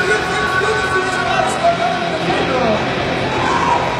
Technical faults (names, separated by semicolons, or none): adaptive stream at a lower bitrate